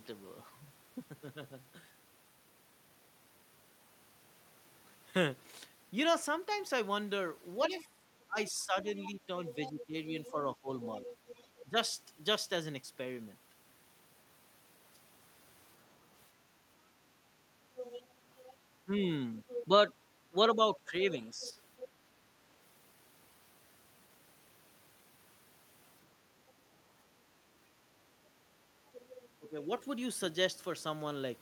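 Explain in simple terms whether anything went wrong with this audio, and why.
Yes, two problems. First, other side's voice leaking through: a faint second voice sits under the talker at 7.65 to 11.64 s, 17.76 to 19.65 s, 21.42 to 21.88 s, a tiny blip at 26.5 s, and 28.88 to 29.49 s. The likely cause is the far end playing on a loudspeaker and the echo canceller missing some of it.

Second, speech suppressed in double talk: at 7.7 to 11.77 s, 18.85 to 21.56 s and 29.39 to 29.7 s, the talker's own voice dips in patches, clearly at first, then more mildly. That's likely because both people were speaking at once, and the canceller turned everything down.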